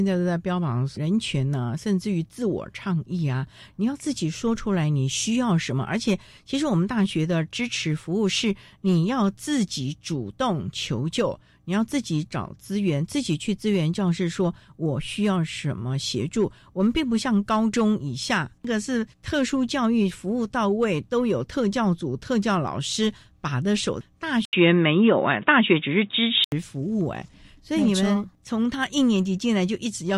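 Input switched to a poorer device, from 24.45 s to 26.52 s of this speech clip: an 80 ms gap opens, then the audio turns dull and boxy, with nothing above 3.8 kHz, a level shift of around 5 dB and a faint new noise floor far below the speech. The likely cause is the recording input jumping to a lower-grade microphone or a headset's call profile, whose narrower band, different gain and own background noise replace the original device until it returns.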